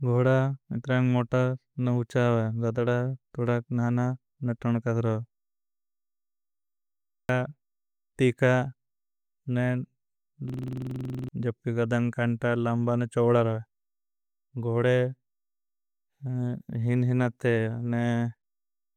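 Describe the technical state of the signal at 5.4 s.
At 5.4 s the speech signal is intact, with no audible fault at that moment.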